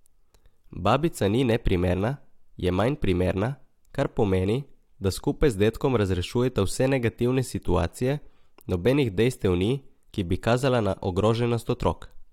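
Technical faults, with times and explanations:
No technical faults can be heard in this speech.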